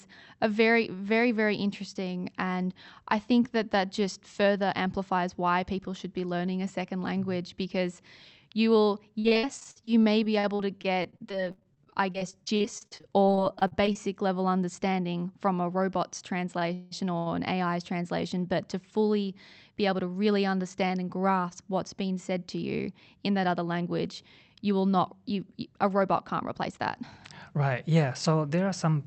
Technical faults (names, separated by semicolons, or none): repeated packet loss (robotic sound); short stall from a late packet; call audio freeze; jitter buffer speed-up